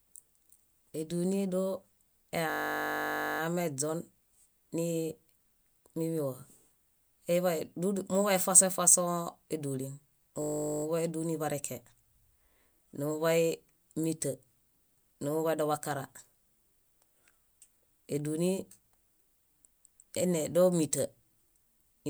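System hang loop at 2.5 to 3.4 s and 10.42 to 10.84 s, the second just after "muḃay efasõ efasõ édulin" and before "édulin breke": the playback froze while the hardware kept replaying one 20 ms slice, heard as a steady 50 Hz buzz, with no audio lost afterward.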